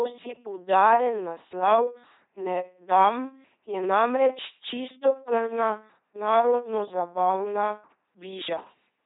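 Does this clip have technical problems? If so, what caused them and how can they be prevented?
Yes, the speech runs through an LPC-10 vocoder for its whole length: a buzzy, robotic tone, since each moment is rendered as either pulse-driven buzz or noise through a simple tract filter, with nothing above 3.8 kHz, which fits a 2.4 kbit/s link. Send it over a higher-rate modern codec instead.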